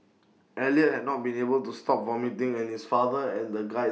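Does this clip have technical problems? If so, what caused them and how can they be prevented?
No, nothing in the recording points to a technical fault, so there is no cause to trace and nothing to prevent.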